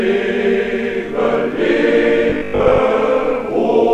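From 2.30 to 2.80 s the audio goes robotic from repeated short buffers: a rigid 50 Hz buzz, likely 20 ms chunks looping while roughly half gets skipped.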